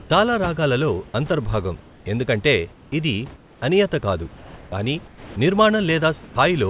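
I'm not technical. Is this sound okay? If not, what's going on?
No. In two ways, something in the call's sending and receiving chain changes what you hear.

First, comfort noise in place of the background. In the quiet gaps between speech, the real room hiss is swapped for a smooth, even, slightly quieter fake hiss. This happens at 0.0 to 0.1 seconds, just before "చాలా రాగాలలో అంతర్భాగం ఎందుకంటే", and again at 1.8 to 2.06 seconds. It returns at 3.36 to 3.62 seconds, after "రాగాలలో అంతర్భాగం ఎందుకంటే ఇది". It appears at 4.36 to 4.72 seconds, after "ఎందుకంటే ఇది అనియత కాదు", and at 5.08 to 5.36 seconds. The likely cause is that the sender pauses transmission when it hears no speech, and the receiver fills the gap.

Second, sound dropped by the voice detector. At 6.24 to 6.36 seconds, a brief bit of real sound, about 60 milliseconds, is lost and replaced by that same fake hiss. The likely cause is that the sender's detector mistook that real sound for background and stopped sending too early.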